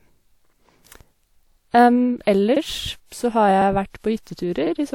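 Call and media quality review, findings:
Overlapping chunks: stutter/click every 1.0 s, at 0.47–0.52, 1.51–1.57, 2.56–2.62 (before "p så har"), 3.62–3.67 (after "p så har"), 4.67–4.72 s. Chunk reassembly: each 1 s chunk restarts 50 ms early, replaying 50 ms. Waveform shows a duplicated stretch with a step at the join. Spectrogram shows a thin vertical broadband line and a repeated formant slice.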